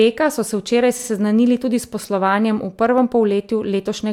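A run of compressed frames was duplicated, a case of repeated frames. Between 0.98 and 1.07 s the decoder plays the same 46.4 ms block two extra times, which fits a pair of codec frames. The speech stutters there and runs 92.9 ms longer.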